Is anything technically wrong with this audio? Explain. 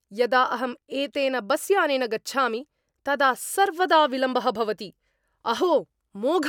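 No, nothing is technically wrong with this audio.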